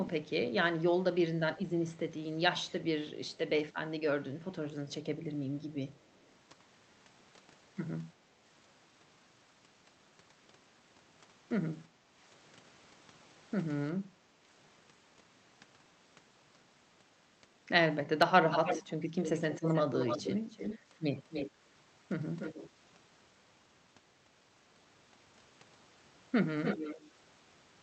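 Early on there's an echo leak: a faint delayed copy of the speech trailing by about 353 ms at 2.64–2.72, 3.27–3.75 and 5.94–6.36 s, likely the far end's loudspeaker bleeding past its echo canceller. Around 11.89–12.13 and 14.1–14.4 s you get background gated by the echo canceller: the room sound ducks by about 7 and 9 dB for a fifth of a second or so while the canceller clamps the mic, then comes back. The echo leak returns much louder, nearly as strong as the direct speech, with the delay now about 297 ms, at 18.5–21.51, 22.39–22.69 and 26.63–27.1 s. There it sounds like a doubled voice rather than a ghost.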